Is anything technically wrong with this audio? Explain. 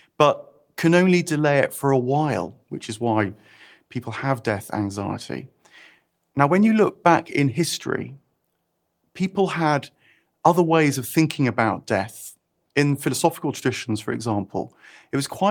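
No, nothing technically wrong stood out when listening to this speech recording.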